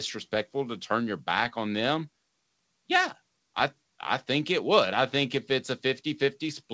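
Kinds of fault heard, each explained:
No faults can be heard anywhere in this clip.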